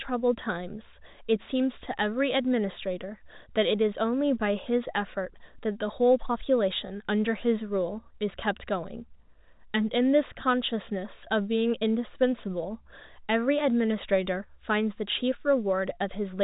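Nothing stood out on listening to this speech, which comes through the narrow band of G.711 telephone coding with nothing above 3.8 kHz.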